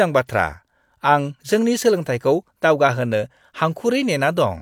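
No technical faults can be heard in the speech at any point in the clip.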